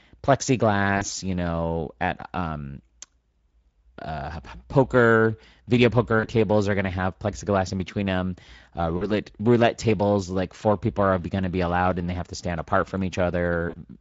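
The Speex codec is starved of excitation bits throughout, at a setting that sounds like roughly 17 kbps. The speech comes out plainly hoarse and noisy, with a grainy, slightly synthetic edge. Any upper band is only a thin noise-like fill.

VoIP packet loss concealed by the speech codec occurs four times. Each time, about 40 ms of audio is lost, and the decoder repeats its last pitch and filter while lowering the gain. These gaps fall at 0.97 to 1.04 s, just before "you know at um", and at 6.19 to 6.29 s, between "uh poker video" and "are going to have". Later ones come at 8.97 to 9.13 s, ahead of "roulette tables like four", and at 13.69 to 13.76 s. Each gap sounds like a brief buzzy or noisy, fading smear. The speech stays weak and distorted for a moment after it resumes.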